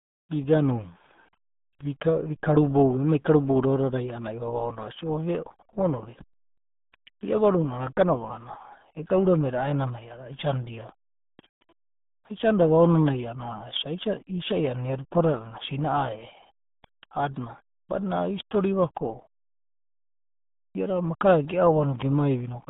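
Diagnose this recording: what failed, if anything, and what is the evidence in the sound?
Codec stage: heavy RealAudio 14.4 codec damage throughout, fitting an 8 kbit/s stream, confines the speech to 150 Hz–3.6 kHz, leaving it muffled and gargly.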